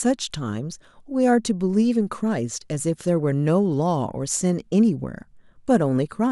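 No technical faults are audible in the speech.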